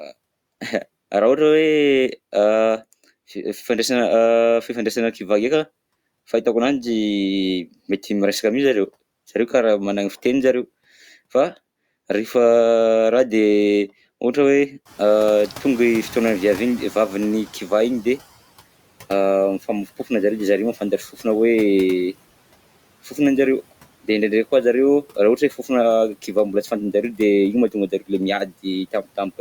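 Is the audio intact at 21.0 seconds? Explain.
No. Between 20.74 and 21.25 s parts of the speech sound swallowed: soft consonants, word endings or a quiet phrase fade, dipping by about 11 dB at the deepest, for a total of around 150 ms. This is speech cut by the noise suppressor. The suppressor mistook these stretches of speech for background noise, turning them down along with it. The room noise had risen from around 15 s, but that is background in the room, not a fault.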